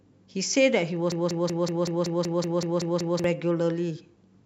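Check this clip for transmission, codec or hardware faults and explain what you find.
One fault is present. A broken-record loop runs from 1.12 to 3.24 s. A 189 ms speech fragment repeats exactly, eleven times. The stream likely stalled and kept resending it, so the underlying speech is lost.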